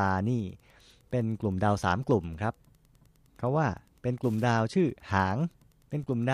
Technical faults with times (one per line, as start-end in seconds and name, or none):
0.00-6.33 Wi-Fi interference